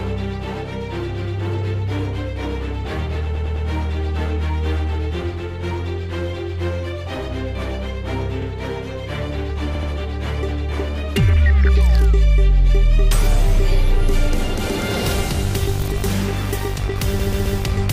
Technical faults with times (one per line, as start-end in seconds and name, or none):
3.35-3.66 repeated frames
9.75-9.90 repeated frames
17.19-17.58 repeated frames